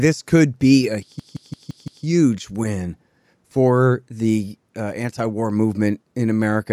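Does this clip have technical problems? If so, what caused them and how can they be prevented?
Yes. From 1.20 to 2.05 s, just after "this could be a", a 0.17 s fragment stutters five times at 5.86 Hz before "win for the uh". This is a system hang loop: the driver stalled while the hardware kept replaying one ring buffer, which fits an 8192-sample buffer. Preventing it means keeping the audio thread free of blocking calls and having the driver mute output whenever buffer refills stop arriving.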